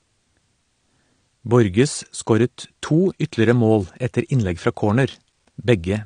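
Throughout the speech, the top end stops abruptly around 9.6 kHz and the upper bands sound thinned and swirly, with fizzy sibilants. This plainly audible damage is likely AAC compression, consistent with AAC-LC at 32 kbps, where the coder strips high frequencies and starves remaining bands of bits.

From 3.81 to 3.84 s, between "scoret to ytterligere" and "etter innlegg fra", a sharp snap sits on top of the speech. This is likely an electrical switching spike, where a brief arc from nearby switching gear is induced into the audio line and recorded as a click cluster.

From 5.30 to 5.46 s, after "etter innlegg fra", a short burst of gritty crackle tears through the speech. This is processor overload crackle: a handful of buffers, which fits buffers of about 5 ms, missed their deadlines, and each was replaced by a hard-edged sliver of silence.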